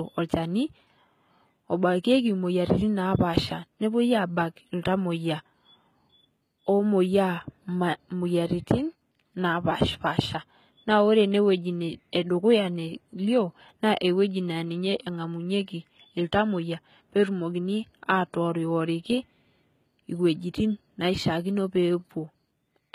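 Throughout the speech, s sounds come out gritty and lispy over a bright but synthetic-sounding top end, likely HE-AAC compression rebuilding the treble from lower bands, which fits roughly 20 kbps.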